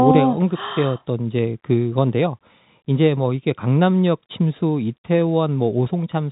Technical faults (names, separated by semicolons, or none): none